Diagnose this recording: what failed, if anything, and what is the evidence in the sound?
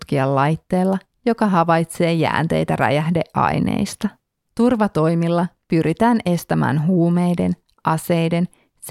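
Nothing stood out on listening to this speech recording that would point to a failure at any stage of the chain.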